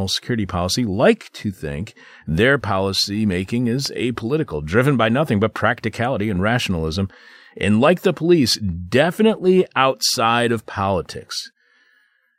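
A loud pop at 3.86 to 3.88 s, a single sharp click a few decibels above the speech, likely from a voltage spike such as static or a switch.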